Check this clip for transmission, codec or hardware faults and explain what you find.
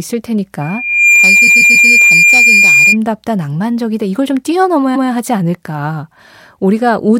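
Two faults are present: a feedback squeal and two bursts of repeated frames.

From 0.61 to 2.97 s there is loudspeaker feedback squeal at 2.4 kHz. The microphone re-captures its own loudspeaker, and the loop gain tops unity at that pitch. It swells over roughly half a second to about 10 dB above the speech. Unlike a steady interfering tone, it grows on its own.

Repeated frames occur from 1.47 to 1.88 s, where a 139 ms block plays three extra times and adds 418 ms, and from 4.95 to 5.09 s, with one extra play. The identical stutter, which fits a run of six compressed frames, sets this apart from concealment of lost packets.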